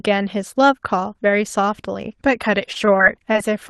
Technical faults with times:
2.65-3.36 repeated packet loss (robotic sound)

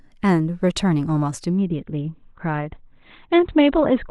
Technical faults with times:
1.56-4.10 adaptive stream at a lower bitrate

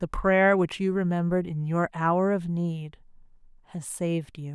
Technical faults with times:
none

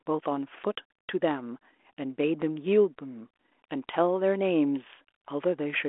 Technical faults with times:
none

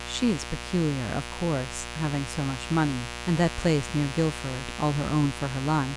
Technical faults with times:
0.00-5.96 mains buzz

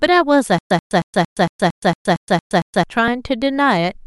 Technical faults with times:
0.58-2.84 stutter with silent gaps

